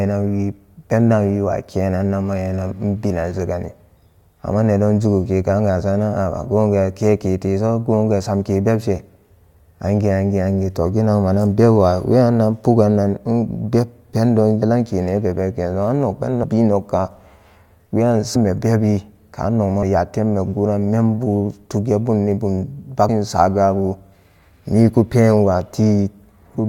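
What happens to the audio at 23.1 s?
At 23.08 s, compressed frames are skipped. Several whole frames, about 150 ms of speech, never reach the output, so the audio jumps ahead. The jump fits frames of about 21 ms. The speech lurches forward at the join, with that stretch missing.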